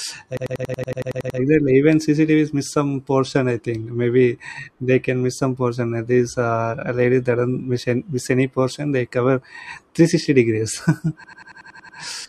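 The system hang loop occurs twice, from 0.37 to 1.39 s and from 11.24 to 11.98 s. The system froze while the hardware kept cycling its ring buffer, which fits a 4096-sample buffer. One 93 ms slice repeats 11 and then 8 times, a machine-gun stutter at 10.8 Hz.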